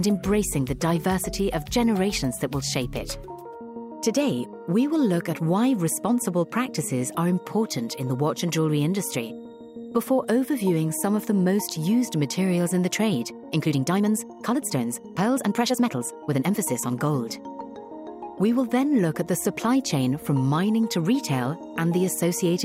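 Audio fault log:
13.35–16.61 s, time-stretched section: the pace jumps abruptly to about 1.43 times normal while the pitch stays where it was, so the passage comes across as rushed, before settling back at 16.61 s. This is likely software squeezing the section to fit a shorter slot, holding the pitch steady by dropping short slices of the audio rather than simply playing it faster.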